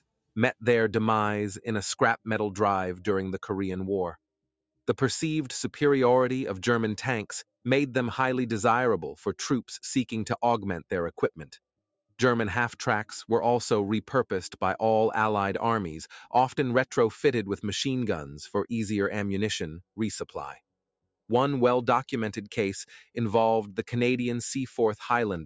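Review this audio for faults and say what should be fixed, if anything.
Sample clock jitter throughout: the converter's clock wanders by around 2 microseconds, mistiming samples and adding hiss about 35 dB down that rises with loud, bright sound. To prevent it, drive the converter from a clean, low-jitter clock source.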